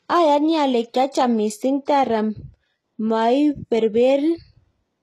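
Throughout the speech, treble stops near 12.3 kHz and sibilants sound gritty and metallic, likely HE-AAC compression rebuilding highs by band replication, pointing to roughly 16 kbps.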